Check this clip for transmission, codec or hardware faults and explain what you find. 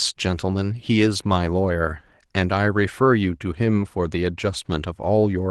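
I find no transmission, codec or hardware faults in this clip.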